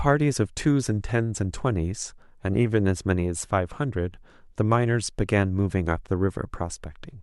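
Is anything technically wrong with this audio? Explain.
No, nothing technically wrong can be heard in this speech recording. There is no fault here that needs explaining.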